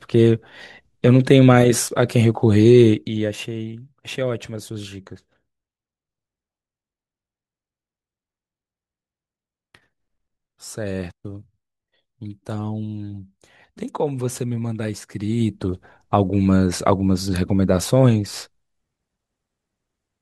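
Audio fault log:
2.90 to 3.47 s, zipper noise: the level falls by about 10 dB in a staircase of tiny unsmoothed steps, roughly a hundred per second, and each jump puts a small click into the waveform, so a fine ticking buzz rides on the sound during the fade.
15.11 to 15.79 s, zipper noise: the same stepped gain runs the other way, raising the level by about 10 dB at a similar rate, and the chain of step clicks again sounds as a zipping texture while the level climbs.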